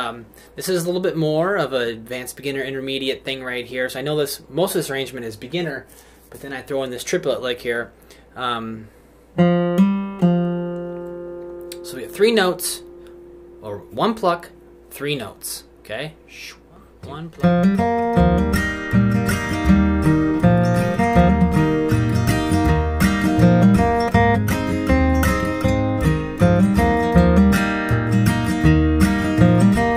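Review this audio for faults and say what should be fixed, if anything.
Nothing here needs fixing; no faults were found.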